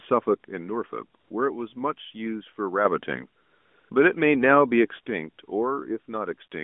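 From 0.45 to 2.85 s the speech level drops abruptly by about 6 dB. This is likely one channel dropping out before the mono sum, a sudden step rather than a gradual fade. Within that stretch, 1.20 to 1.30 s, and later 3.42 to 3.90 s, carry AMR comfort noise: the real background is swapped for a smooth, steady hiss that switches on and off, unlike ordinary room noise. The band stays limited to roughly 200 Hz to 3.5 kHz throughout. From 5.06 s to the end, the same 6 dB step drop returns.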